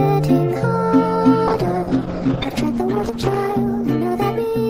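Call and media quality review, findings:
Call bitrate drop, 1.5 s to end: coarse, muffled sound, highs lost. Falling bandwidth estimate starved the Opus encoder; fits 96 to 11 kbps, floor held 1.9 s.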